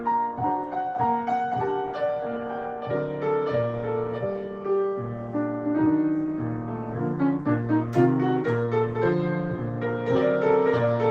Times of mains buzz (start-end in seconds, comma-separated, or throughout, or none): none